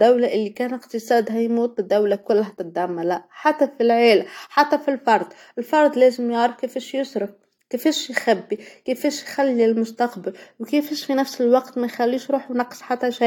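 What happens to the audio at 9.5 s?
Nothing goes wrong at 9.5 s; the audio plays through that moment intact, with no dropout, click or distortion.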